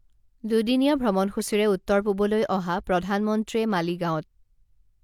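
Nothing in the speech stood out as a technical problem on listening.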